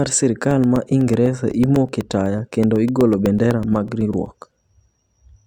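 From 0.51 to 4.51 s the speech picks up a steady tick every 0.125 s, eight a second. That's periodic USB or driver dropouts: something stalls the audio path on a fixed schedule, and about thirty times a couple of milliseconds get replaced with silence.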